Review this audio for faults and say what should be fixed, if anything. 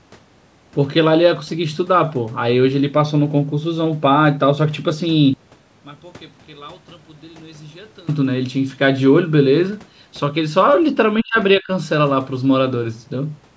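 One channel inverted, 5.34 to 8.09 s: the speech drops by about 26 dB, likely because reversed polarity on one stereo side cancels the shared centre when summed to mono.

Speech suppressed in double talk, 11.23 to 11.37 s and 11.58 to 11.69 s: the talker dips by roughly 30 to 35 dB in brief gaps, likely while the echo canceller ducks the talker along with the loudspeaker echo.

To prevent these, check channel polarity before any mono downmix, and tune the echo canceller's double-talk detection so it stops attenuating the near-end talker during overlap.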